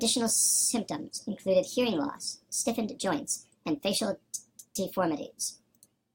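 Throughout, the speech plays 1.5 times too fast and about 7 semitones high, a wrong sample rate consistent with 32 kHz audio played at 48 kHz without conversion. On a spectrogram, harmonics and formants sit 1.5 times higher, and the waveform's syllables are squeezed closer together.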